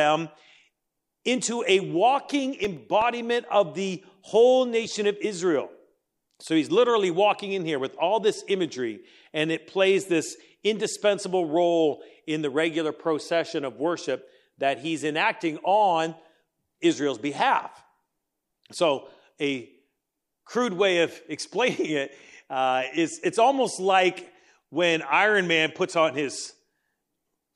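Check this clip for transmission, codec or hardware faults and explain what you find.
One playback fault is audible in this speech clip: CD scratch ticks between 2.64 and 3.14 s. Five short ticks arrive at a steady rate of roughly eight per second, the longest lasting only a few milliseconds. A scratch on the disc damages more data than error correction can rebuild, once per revolution. The player conceals each damaged stretch by interpolating or muting, which produces brief clicks or micro-gaps in time with the disc's rotation.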